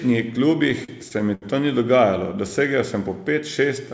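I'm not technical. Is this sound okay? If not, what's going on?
No. Between 0.70 and 1.44 s the speech shows repeated stalls (stutter). The call's data arrived late six times, so the receiver briefly stretched the last sound, for up to about 70 ms at a time, to fill each wait. Nothing is lost, but that stretch drags and stutters. The call line itself carries nothing above 8 kHz.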